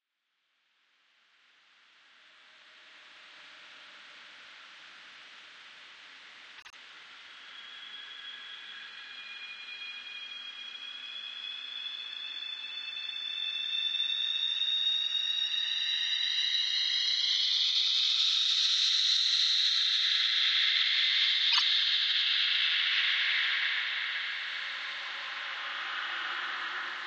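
At 6.57 s there's a stutter from repeated frames: a 78 ms chunk of compressed audio, which fits three frames, gets played twice more, stretching things by about 0.16 s. At 21.51 s a 26 ms chunk repeats twice the same way, adding 0.05 s.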